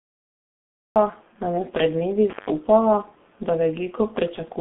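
From 0 to 0.96 s there is digital silence, then a cut-off start: the audio enters abruptly mid-sound just before "nam je pred dnevi", with no natural attack.

Throughout, the G.723.1 codec leaves the speech muffled and hoarse. Nothing passes above 3.8 kHz, consonants blur heavily, and the sound fits roughly 6.3 kbit/s coding on a 200 Hz to 3.5 kHz line.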